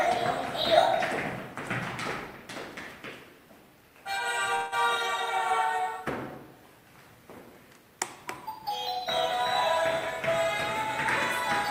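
From 4.55 to 4.74 s there is a call audio freeze: the last sound is stretched into a short fading buzz or hiss for about 166 ms, likely because packets stalled and the jitter buffer emptied. Unlike a dropout, nothing is skipped; the audio resumes exactly where it stopped, just 166 ms late.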